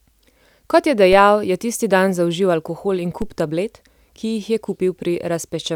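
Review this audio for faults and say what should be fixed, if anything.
Two DC steps break into the speech, at 1.13 s and 3.22 s. At each, the waveform's zero line jumps abruptly by about -17 dBFS and then drifts back as a roughly 5 Hz high-pass drains the offset over a few tens of milliseconds. You hear a low thump while the speech continues unchanged. The waveform shows the baseline leaping and sagging back; a spectrogram shows a brief smear at the very bottom. Prevent this by keeping converters from recalibrating mid-take and switching inputs only while muted.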